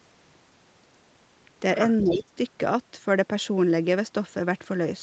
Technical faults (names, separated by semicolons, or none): echo leak; speech suppressed in double talk